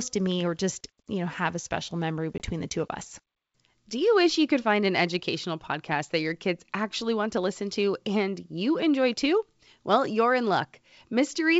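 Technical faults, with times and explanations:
2.38–2.42 s, packet loss on an ADPCM call: a hard-edged 20 ms silent hole, about one packet. Unlike a plain dropout, the sound returns distorted until the decoder's predictor and step size resynchronise.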